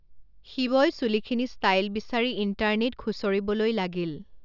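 No technical faults can be heard in this recording.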